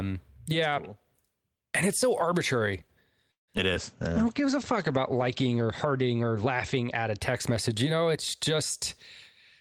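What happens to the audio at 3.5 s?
Right after "and it's so arbitrary", the sound stalls into near-silence from 3.31 to 3.50 s, then resumes where it stopped: a call audio freeze, likely from delayed packets draining the jitter buffer. At 3.58 to 3.60 s a brief smear follows, short concealed packet loss: about 20 ms never arrived and was patched by extending the preceding sound.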